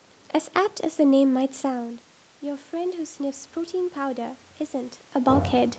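From 1.34 s the automatic gain control, reacting to an input drop of about 11 dB as the talker moves away, raises its gain gradually until the end. This automatic gain rising makes the voice and room noise swell together.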